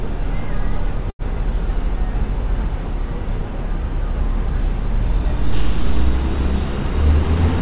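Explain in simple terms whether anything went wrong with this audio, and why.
At about 1.1 to 1.22 s there is a short stall from a late packet. A piece of the sound arrived late, so the last bit was held for about 90 ms. Then it picked up where it stopped, with nothing lost. This came through a phone-style call line that carries nothing above 4 kHz.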